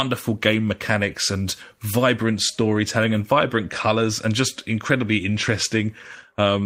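No technical faults can be heard anywhere in the speech recording. Nothing in the sound calls for a timestamp or a closer look.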